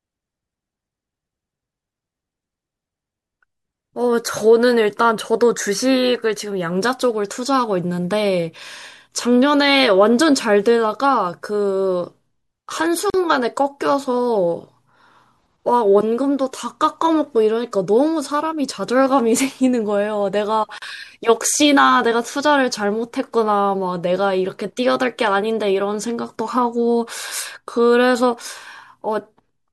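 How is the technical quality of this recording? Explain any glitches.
The recording has two glitches, both gaps at a join of encoded pieces. The speech was encoded in separate sections and spliced untrimmed, so each encoder's start-up delay and final-frame padding remain. At 13.10 s and 20.78 s, a gap of about 40 ms cuts into the speech, its edges smeared, before it resumes where it stopped.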